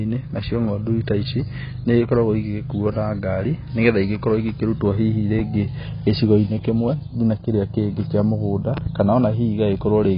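Throughout the speech the sound is dull, smeared and warbling, with nothing above 5.1 kHz and a fizzy edge on sibilants. This is heavy AAC compression, likely AAC-LC at a bitrate fitting around 16 kbps, where the coder drops the top band and quantises the rest coarsely.

From 5.39 to 5.42 s, just after "igĩkorwo igĩkĩrutwo hihi", a single sharp loud pop stands roughly ten decibels above the speech, which carries on beneath it. From 8.77 to 8.89 s, after "kĩrĩa kĩngĩ kĩa mũgũnda", two pops follow in quick succession at a similar level. Each is likely a sudden electrical pulse, from a plug, switch, static or driver glitch, added to the signal.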